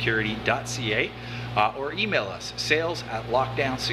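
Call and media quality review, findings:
No faults found on review; nothing audible to attribute to capture, transport or playback.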